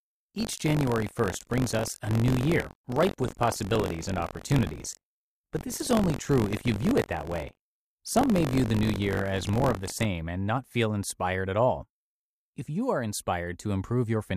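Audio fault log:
0.00–10.06 s, buffer tearing: a steady robotic rattle at 46.9 Hz, which fits a 1024-sample buffer, sounds under the speech until just before "and not feel inspired". Writer and reader overlap inside each period, so a small slice of each buffer replays audio about 40 ms old between hard joins. Unlike dropouts, nothing goes silent, and the buzz falls away whenever the speech stops.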